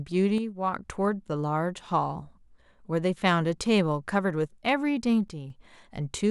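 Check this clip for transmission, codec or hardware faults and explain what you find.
There are two brief level dips, one near the start and one near the end. From 0.38 to 0.76 s, and again from 5.28 to 5.50 s, the speech drops abruptly by about 6 dB, then returns just as suddenly. The likely cause is one channel drops out. One stereo channel goes silent for a moment. Once the channels are summed to mono, the shared content loses half its amplitude. The result sounds like a sudden step down in loudness.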